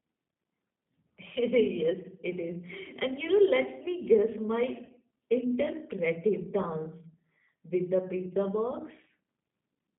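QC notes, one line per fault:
Throughout: G.729 codec. A low-rate speech coder rebuilds the voice from a filter and pitch model, which fits 8 kbit/s, so the speech sounds rough and synthetic, confined to roughly 150 Hz to 3.7 kHz.
4.85 to 4.92 s: VoIP packet loss concealed by the speech codec. About 40 ms of audio went missing, which fits two lost packets, and the decoder extrapolated it into a brief, fading sound that stays weak as the stream resumes.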